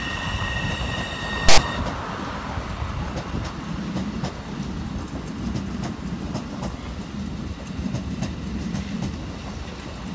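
At 1.49 s a hard-edged burst of static cuts in and stops abruptly at 1.58 s, about 90 ms later. This is file tags played as audio. A block of text metadata was decoded as samples. Text bytes produce a loud, lopsided rasp.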